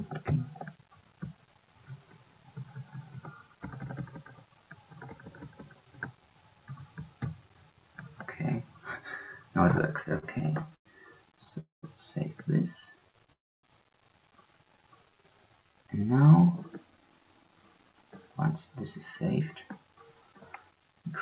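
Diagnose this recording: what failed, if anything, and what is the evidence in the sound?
Repeated stalls (stutter) at the network and jitter buffer stage: from 9.82 to 11.58 s the sound catches 20 times, with 337 ms of stretched continuation and gaps up to 98 ms. From 12.80 to 13.30 s there are 7 shorter catches of up to 12 ms, 63 ms in total. Packets arrived too slowly, so the buffer kept draining.

A call audio freeze follows each stutter run. At 11.60 s the sound holds for 228 ms and drops to silence for about 140 ms. At 13.32 s a 309 ms hold is silent for about 270 ms. The likely cause is packets stalled in transit. Playback resumes where it stopped, shifting everything later.

A jitter buffer slow-down runs from 14.76 to 15.73 s. Playback drops to 87% speed with unchanged pitch, and sounds are drawn out as repeated pitch periods add 134 ms. The receiver was rebuilding its reserve.

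A jitter buffer speed-up runs from 17.25 s to the end. The sound plays at 105% speed with no pitch change and feels slightly hurried. Roughly a fifth of a second is trimmed in small pitch-period cuts as the buffer sheds the excess delay. Throughout the clip, the band stops at 4 kHz, which fits a G.711 mu-law codec at 64 kbps.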